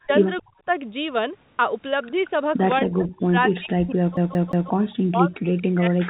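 From 0.04 to 0.68 s the speech dips sharply, up to about 40 dB down, for roughly a fifth of a second in total. This is speech suppressed in double talk. The likely cause is an echo canceller muting the local talker while the far side also spoke.

Within that stretch, at 0.37 to 0.6 s, a faint delayed copy of the speech appears, about 30 dB below it. This is an echo leak. A loudspeaker's echo likely slipped past the far end's canceller and came back 0.23 s late. The same copy returns at 2.06 to 2.79 s, about 25 dB down.

From 2.83 s to the end, the speech is again pushed down by up to about 40 dB, in the same double-talk suppression. Short echo scraps sound at 3.51 to 3.55 s and at 4.90 to 4.95 s, about 30 and 35 dB down.

From 4.17 to 4.7 s the CD is stuck on one turn. A 177 ms piece repeats three times with a tiny mute at each jump. It is the quick, even stutter of a scratched disc.

A longer echo leak follows at 5.57 to 6.0 s, about 30 dB below the speech.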